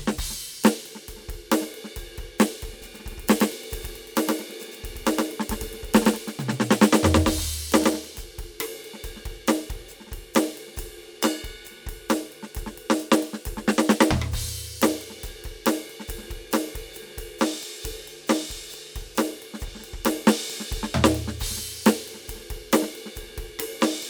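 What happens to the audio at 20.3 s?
Nothing goes wrong at 20.3 s; the music plays through that moment intact, with no dropout, click or other fault.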